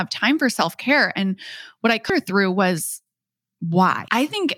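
At 2.10 s and 4.08 s, damaged data in a compressed stream makes the decoder misread corrupted frames and resynchronise, producing a brief blip in the speech.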